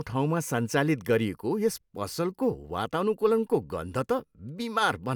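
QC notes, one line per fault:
Nothing stood out on listening to this speech recording.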